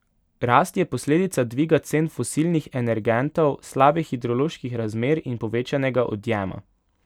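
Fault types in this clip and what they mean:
No audible faults turn up anywhere in this recording.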